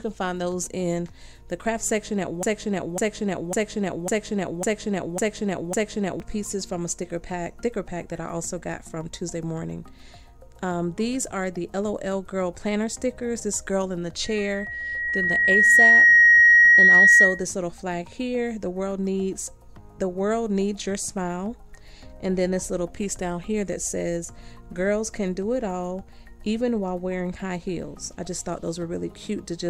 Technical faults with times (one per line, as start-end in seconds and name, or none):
2.43-6.20 broken-record loop
14.24-17.45 loudspeaker feedback squeal